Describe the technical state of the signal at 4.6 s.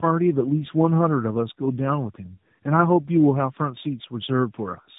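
At 4.6 s the speech is still carrying the tandem speech coding damage that runs through the whole clip. The call was squeezed through a G.729A speech codec at 8 kbit/s, passed over a G.711 mu-law link, then coded again by AMR-NB at 12.2 kbit/s, so two low-rate speech coders worked in series, the second on the first's flawed output. The result sounds rough, muffled and warbly, with nothing above 3.8 kHz.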